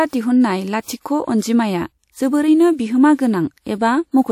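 At 1.02 s a short hiss rises out of the quiet just ahead of a sharp onset in the speech and lasts about 37 ms, until 1.05 s, so the attack arrives softened and smeared. That is pre-echo. The codec spread its quantisation noise across an entire transform block, and because the attack landed late in that block, noise scaled for the loud part also filled the silence before it.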